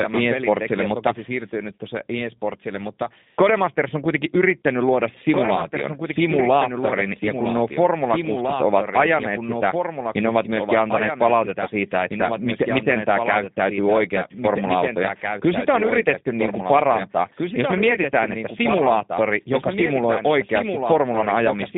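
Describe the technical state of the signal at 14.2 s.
At 14.2 s the speech carries a doubled audio track, present throughout the clip: a second full-band copy runs about two seconds behind and roughly 5 dB quieter, with no decay or room colour. Its likely cause is a slower capture path or an edit holding two misaligned copies.

The same moment also shows G.729 codec damage, plainly audible across the whole clip. The 8 kbit/s coder rebuilds speech from a vocal tract filter, pitch predictor and sparse pulses, so it sounds rough and synthetic, confined to a 150 Hz to 3.7 kHz line band.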